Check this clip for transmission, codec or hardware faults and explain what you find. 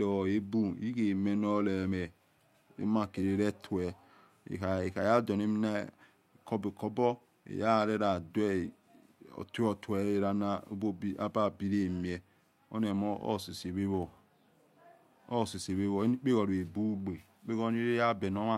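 Nothing in the speech points to a problem in transmission, encoding or playback hardware. No fault can be heard at any point in the recording.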